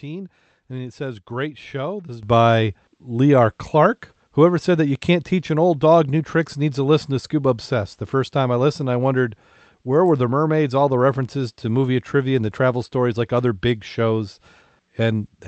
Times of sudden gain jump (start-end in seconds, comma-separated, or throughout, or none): 2.23-15.47